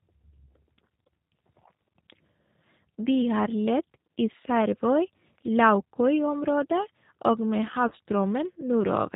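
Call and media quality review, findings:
G.729 codec throughout: band-limited below 4 kHz, rough, slightly synthetic speech at 8 kbit/s. Pulse-based excitation and vocal-tract filtering are plainly audible.

VoIP packet loss concealed by the speech codec, 7.88–7.94 s, just after "og med": roughly 30 ms gap filled with fading extrapolated sound, consistent with three lost 10 ms frames.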